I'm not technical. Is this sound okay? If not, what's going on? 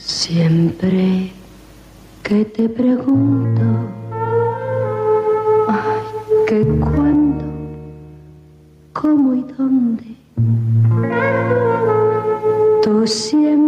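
No. Gain pumping runs through the whole clip: the level is pulled down on every loud sound, so loud and soft parts end up closer together and the sound is squashed, likely from a fast automatic level control reacting to input set too high.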